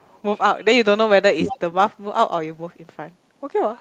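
From 0.0 to 0.21 s a very faint echo leak is heard: a copy of the speech about 335 ms late, likely far-end loudspeaker sound the echo canceller missed, a distinct repeat rather than room reverb. At 1.34 to 1.47 s the speech dips sharply for roughly 150 ms, likely speech suppressed in double talk. This is a pulled-down level rather than a clean dropout. From 1.46 to 1.59 s the echo leak returns much louder, again 335 ms behind.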